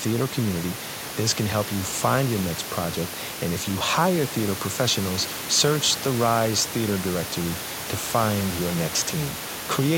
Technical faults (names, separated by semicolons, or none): none